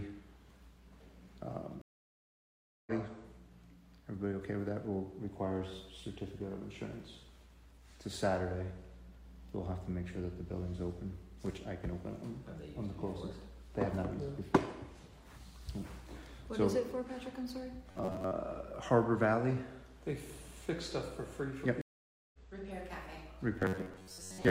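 At 1.81 s the sound drops out for 1.05 s and returns about 0.7 s further on. This is a stream reconnect: the connection broke and a fresh decoder restarted mid-stream. From 17.91 to 18.32 s the sound turns into a rigid metallic buzz at 93.8 Hz, likely robotic sound from repeated short buffers, with roughly 11 ms slices repeated in place of skipped audio. At 21.81 s a second stream reconnect leaves 0.52 s of silence and picks up about half a second later. The same 93.8 Hz buzz returns at 23.60 s and lasts to the end.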